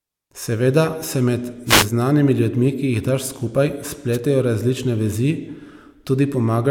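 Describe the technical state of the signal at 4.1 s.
A brief swish of static is heard from 4.12 to 4.18 s, after "ki jih daš skupaj": a wireless microphone noise hit, where the FM radio link faded and receiver noise rose.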